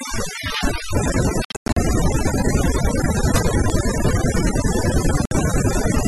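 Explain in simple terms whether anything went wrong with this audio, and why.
Yes, three things went wrong with this speech.

Throughout the clip, the background is turned down and broken up into small twinkling specks. This is overdone noise removal. A noise reduction tool was set far too strong, so it shut down any pitch range that looked like hiss. The quieter parts of the voice were caught too and removed along with the noise.

From 0.21 s to 6.06 s there is a steady, sharp tick about ten times a second, around 50 in all, some louder than others. These are word clock ticks. Two digital devices passing the audio between them were running on separate clocks that disagreed slightly, by roughly 200 parts per million. Each time that drift added up to a whole sample, one sample was lost or doubled, and that tiny jump is what you hear as a click.

Between 1.45 s and 1.77 s the sound cuts out in several short holes. 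Together they lose about a quarter of a second, and the longest lasts about 0.1 s. At 5.25 to 5.31 s there is another gap of about 58 ms. Each time, the sound comes back further along, as if it had kept playing. That points to a likely Bluetooth dropout, where chunks of audio arrived too late for the headphones and were thrown away.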